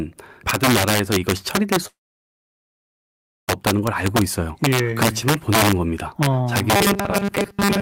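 Integer overflow runs through the whole speech clip. The loudest peaks are driven about 7 dB past the integer limit, and instead of being held there they wrap to the opposite sign. A small fraction of samples flip across the full range, producing violent cracks on loud moments that are far sharper than the flattened, fuzzy edge of ordinary clipping.

From 1.87 s to 3.50 s there is a call audio freeze, likely caused by packets being delayed until the jitter buffer ran dry. The last sound is drawn out briefly and then falls to near-silence for about 1.5 s. When the speech returns, it picks up exactly where it stopped, so the freeze adds a 1.6 s gap and delay rather than cutting anything out, unlike a dropout.

From 6.76 s to the end comes robotic sound from repeated short buffers. The audio is replaced by loops of a very short chunk, likely because new audio arrived too seldom, and most of the real audio is skipped. 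The loops impose a rigid, metallic 200 Hz buzz, which fits a 5 ms repeat. That pitch stays fixed while the speech's rough shape continues underneath, which separates it from codec warble.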